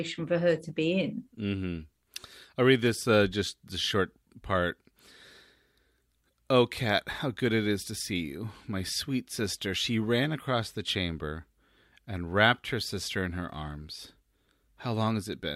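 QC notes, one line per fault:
No technical faults can be heard anywhere in the speech signal.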